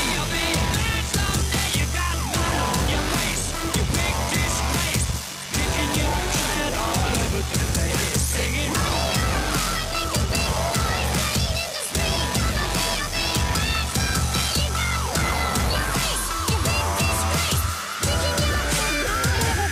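From 0 to 16.03 s a buzz near 46.9 Hz sits under the sound, which runs at 0.86 times normal speed with unchanged timbre. This is block size mismatch (padded): short blocks are zero-filled up to the reader's size, which fits a 1024-sample read.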